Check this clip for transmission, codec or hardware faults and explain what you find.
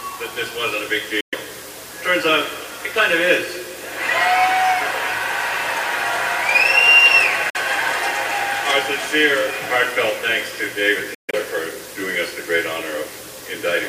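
Three short silences point to a Bluetooth dropout, likely from packets arriving late and being discarded. The sound cuts out at 1.20–1.35 s and 7.50–7.56 s, then at 11.14–11.35 s in scattered holes (longest about 139 ms), and resumes further on, as if it had kept playing.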